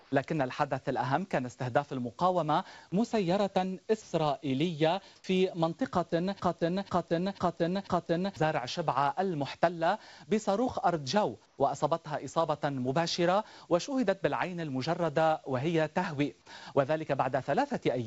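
From 0.00 to 0.12 s the quiet background is flat, featureless hiss about 3 dB lower than the surrounding noise floor. This is comfort noise in place of the background, likely because the sender paused transmission and the receiver synthesised noise roughly matching the background.

At 4.02 to 4.12 s the sound briefly gives way to steady noise, and about 60 ms of it is missing before it resumes. This is sound dropped by the voice detector, likely because the detector mistook the sound for background and stopped sending. The receiver filled the gap with comfort noise.

Comfort noise returns from 5.16 to 5.24 s, this time about 4 dB louder than the real background it replaces.

From 6.40 to 8.36 s a 0.49 s fragment repeats four times back to back, with the sound meant for that stretch lost. This is a broken-record loop, likely from the stream stalling and resending its last buffered piece.

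A final patch of comfort noise at 11.46 to 11.58 s sits about 4 dB below the background. Throughout the clip, nothing is heard above 8 kHz, which points to a G.722 call codec on the WebRTC call path.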